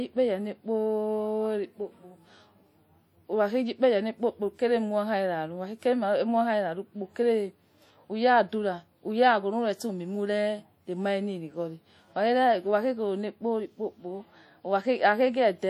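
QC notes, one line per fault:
Throughout: WMA compression. The speech carries a plainly audible ringing, washy smear, with a hiss that rises and falls with the level of the voice. This likely comes from a transform codec encoding with long blocks, spreading quantisation noise over tens of milliseconds around each sound and dropping weaker spectral lines. The degree of damage fits a 48 kbps setting. Content extends to about 20.1 kHz, so the harm comes from coarse quantisation rather than band-limiting.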